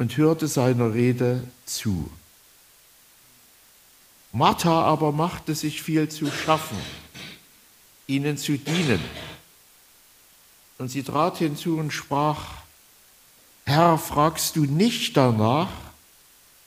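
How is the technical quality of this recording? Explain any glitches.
The quality is limited by one fault that runs for the whole clip: low bit depth with dither. The sound seems to be stored with only about 9 bits per sample. Dither was added before rounding, so the rounding error does not track the signal as distortion. It becomes steady white noise instead. You hear a constant, even hiss from start to finish, roughly 30 dB below the signal. There is no crunch or grit.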